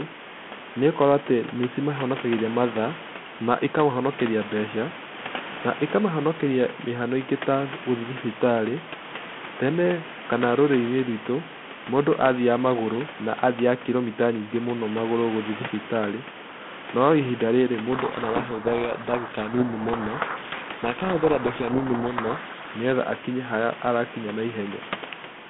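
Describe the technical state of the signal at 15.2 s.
At 15.2 s the signal is intact, with nothing wrong beyond the steady room noise about 15 dB below the speech and the narrow telephone band of the 32 kbit/s G.726 line.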